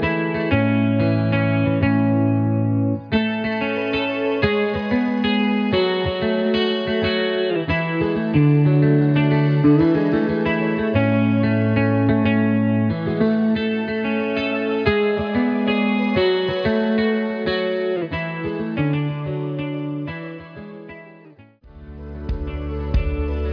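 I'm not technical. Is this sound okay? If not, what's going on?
Yes, no faults heard.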